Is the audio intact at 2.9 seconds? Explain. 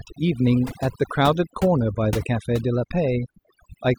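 No, not really. At 2.9 seconds the speech is still caught in the overdone noise removal that runs through the whole clip. The reducer was pushed so hard that it mutes frequency bands sitting near its noise estimate, so the background drops and breaks up into little twinkling specks, and quiet parts of the voice go with it.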